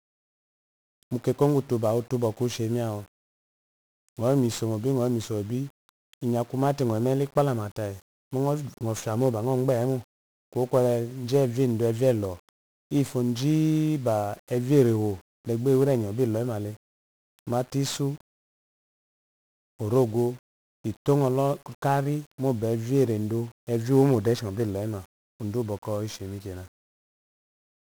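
From the first moment to the last, the speech sits under heavy 1-bit DFPWM compression. Each sample is squeezed into a single bit that only nudges an adaptive level up or down, so the waveform is rebuilt as a crude staircase. That leaves a thick, broadband fizz riding on everything, the voice comes across fuzzy and crackly, and the upper treble is swamped by hiss. The density of the noise fits a rate of around 48 kbps.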